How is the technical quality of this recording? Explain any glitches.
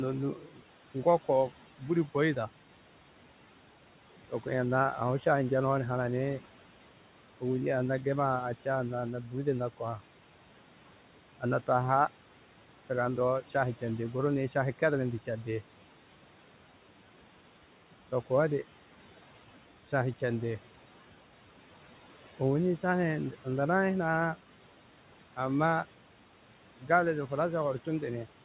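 The recording has two audible faults, both from noise suppression. It is also band-limited, with nothing above 4 kHz, which fits a narrowband telephone-style codec such as G.711, and the room noise sits about 19 dB below the speech.

Noise suppressor artifacts run through the whole clip. The suppressor estimates the steady room noise and turns those frequency bands down by about 12 dB, frame by frame. Between phrases the background sinks, then rises again under the speech. This is not a steady noise floor or a codec hiss. It pumps in step with the speech, and that movement is what gives it away.

Speech cut by the noise suppressor occurs from 0.36 to 0.6 s. Here the suppressor took part of the speech for noise and pulled it down with the background, by about 11 dB at the deepest point, over roughly a fifth of a second in total. The affected sound turns faint and swallowed rather than disappearing outright. 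Unlike a dropout or packet loss, there is no hard gap, click or repeated fragment, only a soft sag in level.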